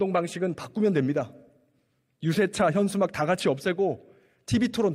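Nothing stood out on listening to the audio.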